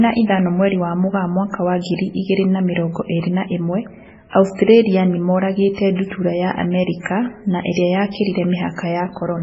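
Speech throughout carries heavy MP3 compression artefacts, likely from encoding at a very low bitrate, which fits roughly 16 kbps. Nothing remains above 7.7 kHz, weak spectral detail flickers frame to frame into a watery, swirly texture, s sounds chirp metallically, and consonant attacks smear.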